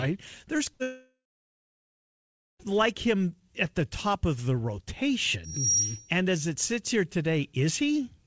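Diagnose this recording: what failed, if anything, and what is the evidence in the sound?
At 0.74 s the speech briefly turns into a short held sound that fades, then resumes slightly further along at 0.82 s. This is a burst of packet loss at the network stage: about 60 ms of audio never arrived, and the receiver's concealment stretched the last sound across the gap.

Right after that, from 0.82 s, a concealed tail fades and then roughly 1.4 s of silence follows. The speech returns at 2.62 s on "like him at the", with about 1.8 s missing. This is most likely a long network dropout, with nothing arriving for the whole stretch.

From 5.44 to 6.14 s a single 5.7 kHz tone swells over roughly 0.3 s to about 5 dB above the speech. This is loudspeaker feedback squeal, an acoustic loop where a microphone picks up its own loudspeaker. It passes through the G.722 call path intact because that path carries frequencies up to 8 kHz.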